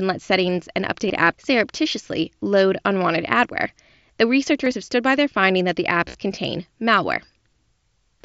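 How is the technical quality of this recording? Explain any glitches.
The recording has three short dropouts from concealed Bluetooth headset packet loss, carried over an mSBC wideband link that passes speech up to 8 kHz with light grain on louder sounds. The dropouts occur at 1.08 s, between "let settings and" and "apps surreptitiously load unwanted"; at 4.65 s, between "load unwanted adware the" and "have stood by their"; and at 6.09 to 6.15 s, between "their finding that the" and "contain malware". Packets from the headset never arrived, so the receiver filled each gap by repeating the best-matching recent stretch of waveform. The first two gaps are about 15 ms each and come through as barely perceptible smears. The third scatters about 45 ms of losses over 60 ms, with no run longer than 15 ms, so these losses are also largely hidden.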